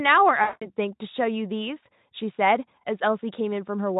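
From 0.43 s to 0.67 s the speech shows VoIP packet loss concealed by the speech codec: about 180 ms of audio goes missing, which fits nine consecutive 20 ms frames. The decoder keeps stretching the last pitch and spectral shape into a buzzy tone or coloured noise that fades. The voice stays thin and weakened for a short stretch after the signal returns, while the Speex coding itself leaves only faint traces.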